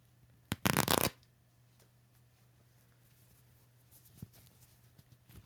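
Nothing is technically wrong with this clip of sounds.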